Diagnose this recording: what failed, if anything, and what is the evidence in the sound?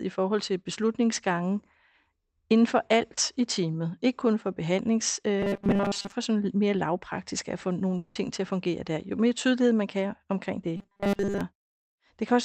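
Robotic sound from repeated short buffers appears at 5.39 to 6.12 s, after "ikke kun for behandlings" and before "sådan mere lavpraktisk at", and again at 10.77 to 11.41 s, after "man kan omkring det". The speech collapses into a rigid, metallic buzz at 200 Hz, which fits a 5 ms fragment being replayed over and over. Most of the real speech in those spans is skipped. The likely cause is a starved jitter or playout buffer.

A long network dropout sits at 7.97 to 8.17 s, between "mere lavpraktisk at få" and "til at fungere der". About 180 ms of audio is missing. Concealment fills that whole gap with a stretched, fading continuation rather than silence, and then speech resumes without the lost portion. The likely cause is lost packets on the network stage.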